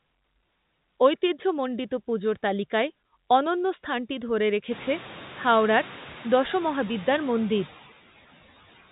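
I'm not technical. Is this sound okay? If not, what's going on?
No. There are noise suppressor artifacts all the way through. A noise suppressor is a filter that tries to remove steady background hiss by turning down whatever it judges to be noise, moment by moment. Here it cuts the background noticeably, so the noise dips in the gaps and swells back under the speech. This gets easier to hear after the room noise rises at around four and a half seconds, which gives the suppressor more to fight against.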